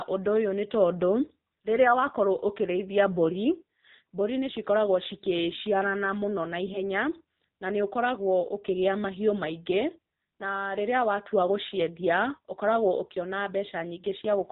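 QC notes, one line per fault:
Throughout: AMR narrowband mobile codec. The whole clip has that phone-call sound. Nothing gets through above 4 kHz, so the speech is dull and boxy with no air or sibilance on top. The buzzy, synthetic edge is plainly audible, and it fits one of the lower AMR-NB modes, around 7.4 kbps. At that rate the vocal-tract model gets only a few pulses per 5 ms slot to drive it, so the voice comes out thin and a bit robotic.
6.66 to 6.80 s: AMR bit errors. For about 140 ms the voice turns hoarse and gargly and scratches briefly, while the pitch and loudness hold roughly steady. That span covers a handful of 20 ms frames. It points to a weak link flipping a few percent of the less-protected bits. The core bits still passed their check, so the frames were decoded anyway, but with the excitation pulses in the wrong spots and the fine gain and spectral values off.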